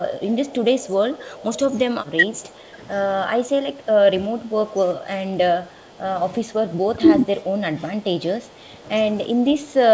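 From 0.19 to 2.5 s there is an echo leak. A faint copy of the speech trails about 350 ms behind the original, roughly 25 dB down. It is likely loudspeaker sound that the far end's echo canceller failed to remove. On a spectrogram it shows as weak, time-shifted duplicate harmonics.

Overlapping that, from 1.71 to 2.22 s, comes speech suppressed in double talk. The voice dips by about 10 dB in short bites, likely because the canceller ducked both talkers at once. On the waveform this appears as brief notches in the envelope.

Background gated by the echo canceller follows at 2.5–2.77 s and 3.7–3.87 s. The room noise drops by about 6–7 dB and then returns, leaving pale gaps in the spectrogram's noise floor.

Double-talk suppression recurs at 4.24–4.79 s, with similar 10 dB bites.

Gating returns at 5.66–6.01 s, a drop of about 6 dB.

Double-talk suppression appears again at 6.87–7.22 s. The final stretch, from 8.72 s to the end, is pulled down much deeper, around 20 dB, and shows as a marked collapse of the waveform.

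Throughout, the band stops at 8 kHz, which is expected for G.722 at 64 kbps.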